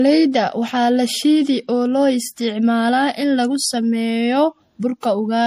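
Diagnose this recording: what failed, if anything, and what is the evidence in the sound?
The codec stage failed throughout this speech clip. Nothing exists above 15.2 kHz, which shows on a spectrogram as a flat ceiling, and two layers of coding artefacts sound together. This is likely transcoding between lossy codecs, which fits MP3 near 64 kbit/s re-encoded as AAC-LC near 48 kbit/s.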